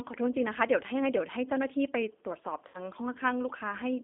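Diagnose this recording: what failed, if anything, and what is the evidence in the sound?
G.729 codec damage throughout, at the codec stage: the speech is confined to roughly 250 Hz to 3.6 kHz, sounds rough and synthetic, and fits 8 kbit/s pulse-based vocal-tract modelling.

VoIP packet loss concealed by the speech codec, 2.68 to 2.77 s, at the network stage: about 60 ms went missing, consistent with three packets. The decoder extrapolated pitch and filter with fading gain, and the sound stayed weak or distorted briefly afterwards.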